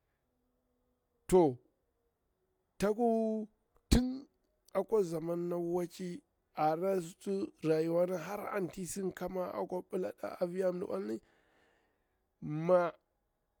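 No technical faults can be heard anywhere in the speech recording. Nothing in the audio calls for a timestamp.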